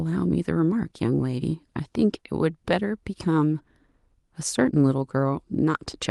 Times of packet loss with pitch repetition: none

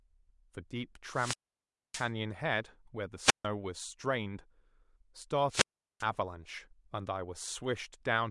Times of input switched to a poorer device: none

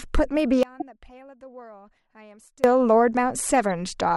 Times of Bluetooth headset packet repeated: none

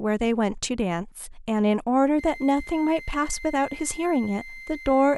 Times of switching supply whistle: 2.19-5.18

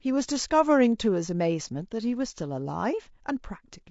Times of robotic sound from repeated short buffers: none

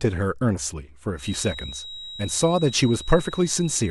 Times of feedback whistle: 1.15-3.90

